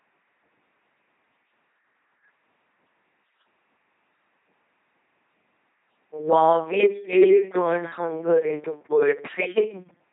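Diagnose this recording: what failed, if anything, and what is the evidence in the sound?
The fault sits in the codec stage: the whole speech clip has been through an LPC-10 vocoder, with heavy damage from start to finish. The voice is a buzzing, mechanical robot tone, because each moment is resynthesised as either a pulse train or noise through a ten-pole filter, which fits a 2.4 kbit/s rate. On a spectrogram, harmonics look rigidly uniform, fricatives turn to flat noise, and nothing appears above 3.8 kHz.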